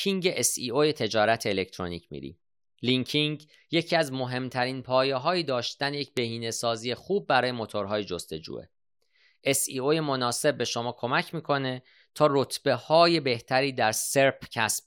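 At 6.17 s the speech carries a bit error spike: three consecutive samples jump by a power-of-two step, peaking around -14 dBFS, then drop straight back, as a flipped bit in memory or on a digital link would cause. It sounds like one sharp, broadband tick with no link to the speech around it. Unlike an edit click or a dropout, no audio goes missing and the waveform resumes exactly where it was.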